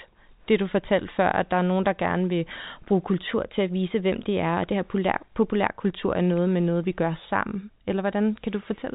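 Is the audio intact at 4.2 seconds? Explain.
No. A drift correction step runs from 3.28 to 5.72 s, after "der gerne vil bruge": the sound plays 5.5% fast, about 92 cents sharp, likely from clock-matching rate adjustment, snapping back before "kultur er noget med".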